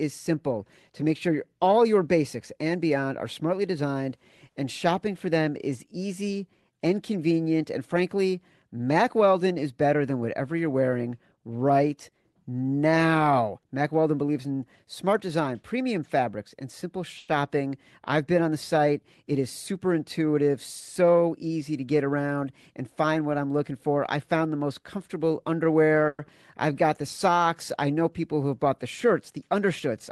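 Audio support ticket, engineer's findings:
Call audio freeze, 17.17–17.30 s, right after "premium fabrics and simple". 110 ms inserted: last sound carried on as a short fading fill, then speech resumes where it left off, nothing lost. Likely cause: delayed packets draining the jitter buffer. Playout delay up 110 ms.
Call audio freeze, 26.08–26.21 s. Same signature: 110 ms fill, no content missing, delay rises another 110 ms.

Jitter buffer speed-up, 19.24–20.50 s, following "been on the site". Speech runs at about 106% with pitch unchanged, slightly rushed. Receiver trimming pitch-period-sized slices in quick succession to shed excess buffered audio, roughly a tenth of a second in total. Consistent with packets arriving bunched after a hold-up, overfilling the buffer.

Skip ahead, 26.27–26.30 s, just after the second freeze. Playback jumps forward, around 70 ms of speech gone, joined with only a 10 ms bridge. 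Audio dropped while later packets were already queued, pulling delay back by roughly 50 ms.

Jitter buffer slow-down, 26.72–27.35 s, ending just before "I know people who". Speech at about 94% speed, same pitch, sounds drawn out. Receiver repeating single pitch periods back to back, 45 ms added, rebuilding reserve. Carried over an Opus call path, 12 kHz audio bandwidth, coding level pointing to roughly 20 kbps.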